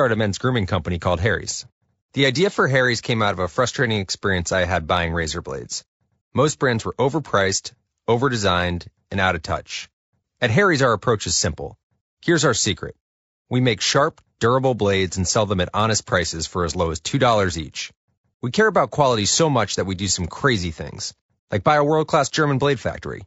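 From start to finish the speech carries a rough, grainy texture, with a noisy haze filling the gaps between the harmonics and a top band that sounds thinned and somewhat synthetic. This is likely low-delay AAC compression of the AAC-ELD kind used in video calls. Its short frames of roughly 10 ms cannot separate closely spaced pitch harmonics well, and at a data rate that sounds like about 32 kbps the damage is plainly audible.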